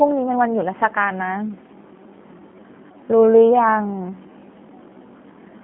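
Throughout, the speech has passed through a G.729 codec that rebuilds it from a coarse filter-and-pulse model. It sounds rough and synthetic, confined to 200 Hz to 3.5 kHz, with nothing above 3.8 kHz, which fits an 8 kbit/s link. From 1.33 s to the end is a time-stretched section, likely from software fitting the audio to a length. The pace drops abruptly to 0.66 times speed while the pitch holds, leaving the speech dragging.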